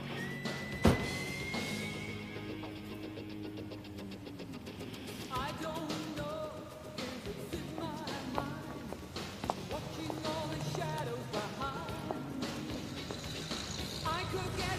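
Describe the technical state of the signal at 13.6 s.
At 13.6 s the signal is intact, with no dropout, distortion, noise burst or other fault audible at that moment.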